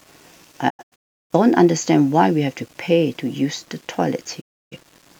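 Low bit depth without dither runs from the start to the end of the speech: a grainy, rough texture that rises and falls with the signal, sitting roughly 35 dB below it. The likely cause is the audio being rounded to very few levels, which fits 8-bit samples, with no dither to decorrelate the error. Because the rounding error tracks the waveform, quieter syllables and decays turn gritty and coarse rather than simply hissy.

Digital broadcast dropout first strikes between 0.68 and 1.34 s. The sound breaks into several short holes totalling about half a second, the longest around 0.34 s, each cut shaped by a quick 20 ms fade. It returns at 4.40 s, muting the speech for about 0.3 s until 4.77 s, again with a 20 ms fade. The receiver lost valid frames, muted until clean data resumed, and whatever was sent during those gaps is gone.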